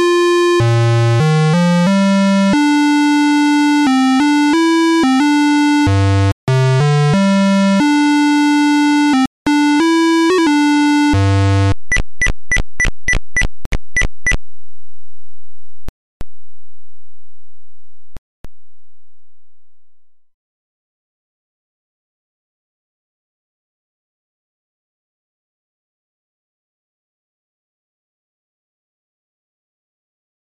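Silent gaps at 6.32, 9.26, 13.65, 15.89 and 18.17 s, 0.07 to 0.33 s long, are likely Bluetooth dropouts. Late packets were dropped, and the sound resumes further on.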